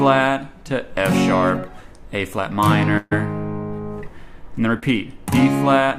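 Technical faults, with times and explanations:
2.97–3.13 s, burst of packet loss: about 140 ms went missing; the receiver continued the last sound and faded it down, so the spectrogram smears flat before the audio resumes.
4.79–4.84 s, short concealed packet loss: about 20 ms lost and filled by extrapolation, heard as a brief smear; the waveform shows a short, slightly blurred patch.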